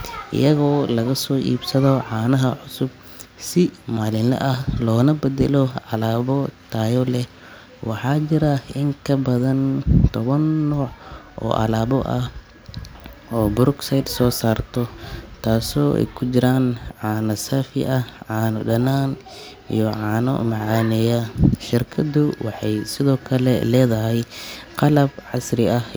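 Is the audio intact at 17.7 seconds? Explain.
Yes, at 17.7 seconds the speech plays through intact, with no dropout, click, distortion or other fault.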